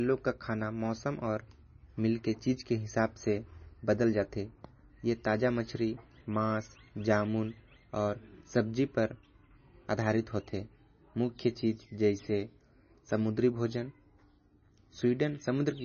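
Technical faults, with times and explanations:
Throughout, MP3 compression: a flat spectrogram ceiling at 6.6 kHz with flickering gaps below it; the heavy watery swirl likely reflects a very low bitrate.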